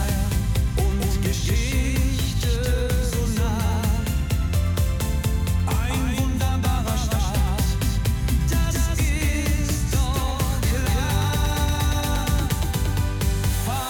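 From start to finish the audio carries a doubled audio track: a second, full-band copy of everything sits roughly a fifth of a second behind the original, at about the same level. Because the copy has no decay or room colour, each onset is restated cleanly rather than smeared, giving a hard slapback that muddles transients throughout. The likely cause is the same signal reaching the mix twice, once through a slower capture or routing path.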